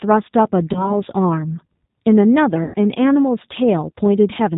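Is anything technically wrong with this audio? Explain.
Yes. The G.729 codec is at work throughout. Everything above 4 kHz is gone, and the speech has a plainly rough, synthetic edge from its sparse-pulse excitation, which fits 8 kbit/s. Simple band-limiting would sound dull but smooth. This sounds grainy.

VoIP packet loss concealed by the speech codec occurs at 0.73–0.99 s (20 ms lost, fitting one packet) and 2.64–2.76 s (100 ms lost, fitting about five). The decoder stretches its last pitch and filter into a fading buzzy tone or coloured noise instead of leaving silent gaps.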